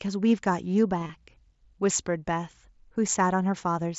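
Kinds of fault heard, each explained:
Concealed Bluetooth headset packet loss, 0.99 to 1.09 s: scattered lost headset packets, longest run 22.5 ms, patched with repeated recent waveform, leaving a brief buzzy warble.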